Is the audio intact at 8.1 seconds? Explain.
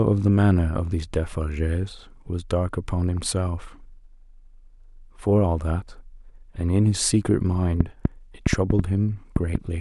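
No. At 8.1 seconds the speech sits under a train of clicks running from 7.80 to 9.56 s: a series of similar sharp pops at about 4 per second, unevenly spaced, around seven in all, each standing roughly 20 dB above the speech and ticking through pauses as well. The likely cause is an outside source repeatedly injecting a brief pulse into the signal, such as electrical interference or a faulty connection or power supply.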